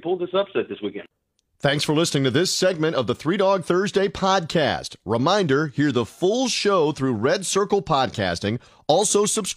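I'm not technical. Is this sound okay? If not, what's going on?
Yes, no problems heard.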